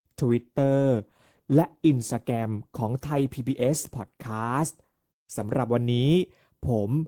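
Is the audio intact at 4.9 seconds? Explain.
No. At 4.9 seconds the speech is still dull and band-limited, with the treble missing or replaced by a thin synthetic hiss and coding artefacts stronger. The quality jumps to a fuller, cleaner sound at 5.58 s with no gap. This is an adaptive stream starting at a low bitrate: from 0.0 s the player began on a cheap rendition to start quickly, one that sounds like Opus at around 16 kbit/s, then switched to a better one, near 64 kbit/s, once it had gauged the connection.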